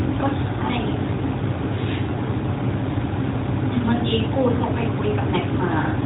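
No technical faults are audible.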